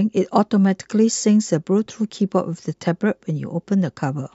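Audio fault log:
2.72–2.74 s, compressed frames skipped: the speech jumps ahead about 20 ms, because missing or rejected frames were dropped.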